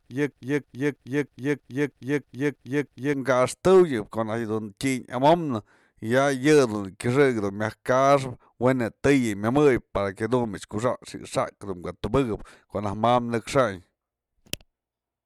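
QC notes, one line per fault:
0.00–3.14 s broken-record loop: already under way when the clip opens, a 319 ms fragment of speech repeats exactly, back to back, nine times. This is likely a player or stream that stalled and kept resending its last held piece, so the speech for that span is lost.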